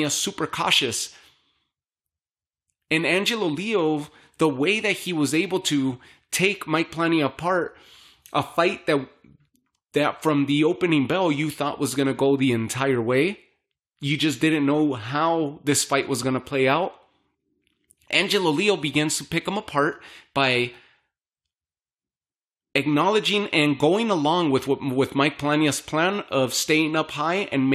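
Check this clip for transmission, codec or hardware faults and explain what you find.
No faults can be heard anywhere in the recording.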